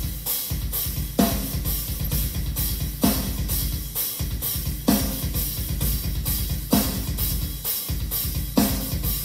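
From 2.05 to 2.08 s there is a short burst of DAB burbling: weak reception let a small share of bit errors, around a third of a percent, slip past error correction, so corrupted samples put short blips of noise into single sub-bands, giving a brief burble.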